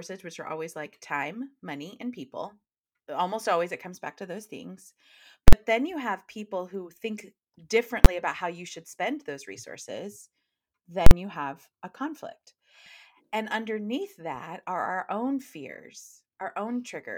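Three loud bangs cut through the speech: at 5.48 to 5.53 s, a single one at 8.05 s, and at 11.06 to 11.11 s. These are invalid numbers at full scale. A calculation produced infinite or invalid values, which were pinned to maximum output for a whole processing block. The roughly 46 ms events fit a 2048-sample block and sound like a harsh pop at each edge with silence between. The 12 ms one at 8.05 s, consistent with a 512-sample block, collapses into one bang.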